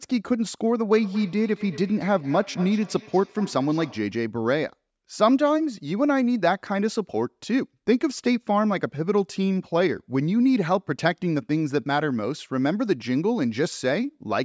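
From 0.97 to 4.17 s there is feedback echo between two devices: a second device on the call replays this microphone's signal, which is picked up again. The speech returns roughly every fifth of a second, thinner and ringing, peaking about 17 dB below the direct speech.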